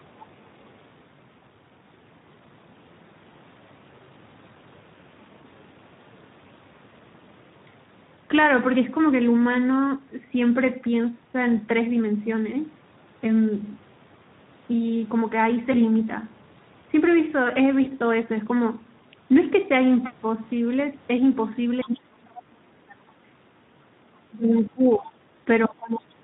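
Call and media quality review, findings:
Speex codec at 11 kbps throughout: the narrow excitation budget leaves the speech hoarse, noisy and grainy, with the top band reduced to a shaped hiss.

VoIP packet loss concealed by the speech codec at 15.71–15.77 s and 17.83–17.92 s: each gap fits one lost 20 ms frame. The decoder extrapolates its last pitch, giving a brief buzzy or noisy smear that fades before the speech recovers.

Other side's voice leaking through at 21.82–21.97 s and 22.36–22.42 s: likely residual loudspeaker echo missed by the canceller. The result is faint scraps of a second voice, about 20 dB below the talker.

Speech suppressed in double talk at 21.84–23.4 s and 24.29–25.2 s: likely the echo canceller clamping both sides during overlap. The talker dips sharply, by around 30 dB and 25 dB at the deepest.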